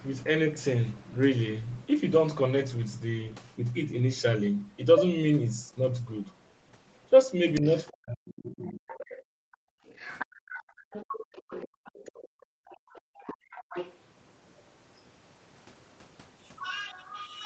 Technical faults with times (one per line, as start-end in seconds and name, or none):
4.98-5.04 other side's voice leaking through
7.54-7.92 other side's voice leaking through
7.60-9.43 speech suppressed in double talk
8.58-13.98 other side's voice leaking through
9.71-10.91 background gated by the echo canceller
11.68-13.50 background gated by the echo canceller
14.57-15.01 other side's voice leaking through